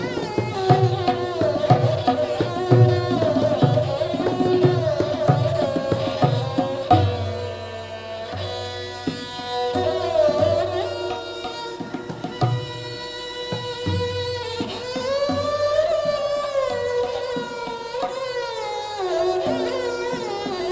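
Aliasing runs through the whole clip. The audio appears to have been downsampled, consistent with a drop from 48 kHz to 16 kHz, without an anti-aliasing filter, so content above 8 kHz folds back into unrelated, lower frequencies about 30 dB below the signal, giving bright sounds a gritty, metallic edge.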